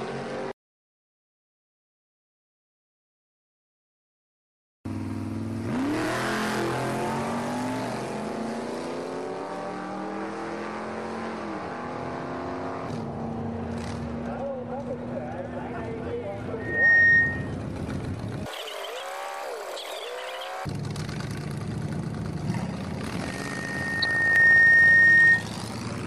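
At 6.04 s the sound jumps forward, roughly 40 ms missing, with no gap of silence. That is a dropped buffer, likely an overrun where samples were overwritten before being read. Unlike a dropout, the two sides butt together rather than leaving a hole.

From 16.6 to 17.54 s a loudspeaker feedback squeal rises: a single 1.8 kHz tone swells over about a third of a second to about 15 dB above the programme. The mic-to-speaker loop gain exceeds one there. Its steady pitch distinguishes it from broadband noise.

At 19.0 s the same dropped buffer skip recurs, again around 40 ms lost.

From 24.02 to 24.05 s DAB burbling adds brief blips of noise as residual bit errors corrupt the audio data across seven frames, putting errors into individual sub-bands, a texture unlike a clean click.

At 24.36 s a longer dropped buffer skip removes about 70 ms.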